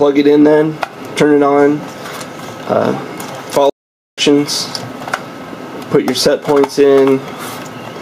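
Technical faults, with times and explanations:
Throughout: gain pumping. Level swings by around 10 dB, loud and soft parts pulled closer in level and the sound squashed, likely from excessive gain with a fast limiter.
3.69–4.18 s: playback stall. Sound cuts to silence for about 0.48 s, then resumes. Likely the player ran out of data or its thread blocked.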